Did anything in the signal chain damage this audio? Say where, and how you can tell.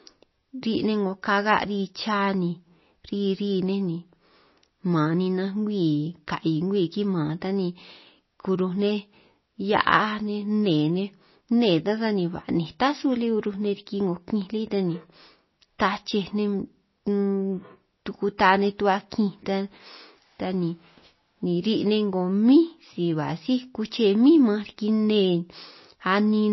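Yes, it sounds like MP3 compression at the codec stage, throughout the speech. The treble stops dead at about 5.8 kHz, and the swirly, watery texture with chirpy s sounds likely comes from a starved encoder, fitting roughly 24 kbps, dropping weak frequency lines frame to frame.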